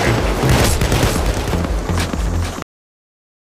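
A doubled audio track runs through the whole clip: a second full-band copy of the sound trails the original by about half a second at a level roughly 5 dB lower. It has no decay or room colour, so it reads as a dry, flat repeat rather than an echo, and it starts abruptly. The cause is likely the same signal being mixed in twice, either captured again through a slower path or held as two misaligned copies in an edit. A cut-off end follows at 2.62 s, where the audio stops mid-sound and drops straight to digital silence with no decay, staying silent to the end. This happens when the final buffers are never written or played out, so the tail of the material is simply missing.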